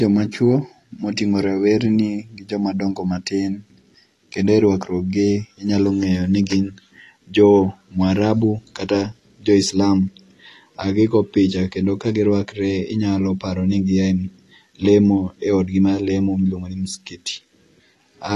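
From start to finish the speech sounds dull and smeared, with a warbling, fizzy edge on sustained sounds and sibilants. This is likely AAC compression at a low bitrate, consistent with AAC-LC around 32 kbps, where the encoder discards detail it judges inaudible and lowers its bandwidth. On a spectrogram the energy stops at 12 kHz, leaving an empty band above a flat ceiling.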